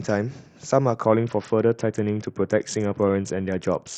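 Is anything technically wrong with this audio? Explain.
Yes. A Bluetooth SBC bit pool drop begins at 1.02 s and lasts to the end of the speech. The link appears to have been squeezed, so the encoder cut its bit budget, which fits the bit pool falling from 31 to 7 and a rate near 61 kbps. The highest sub-bands get almost no bits and the rest are coarsely quantised, so the voice turns dull and muffled, with a gritty, grainy noise riding under it that never recovers before the clip ends.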